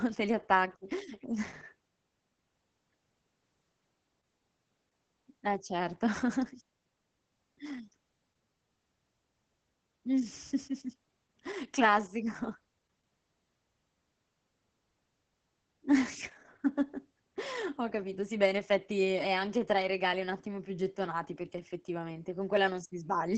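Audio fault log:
throughout: Opus voice compression, heavy, in SILK mode with the band cut at 8 kHz, which fits a bitrate near 10 kbps. Coarsely coded excitation leaves speech muffled, hoarse and slightly robotic. A spectrogram shows nothing above 8 kHz and smeared, ragged harmonics.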